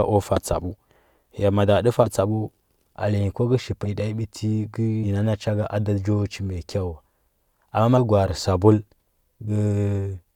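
The speech skips ahead at 0.35, 2.03 (after "ya mada tə"), 3.85, 5.03, 7.97 and 9.47 s: compressed frames skipped, with roughly a tenth of a second or less missing each time, consistent with 20 ms frames. Each join shows as a short vertical discontinuity in the spectrogram.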